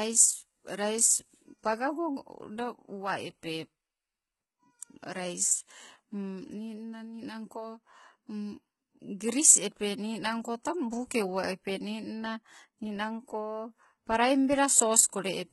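HE-AAC compression is the likely cause of the heavy damage heard throughout the speech. Nothing remains above 11.8 kHz, and the treble is rebuilt from copied lower bands rather than coded, so s sounds turn gritty and lispy. This fits a bitrate near 16 kbps.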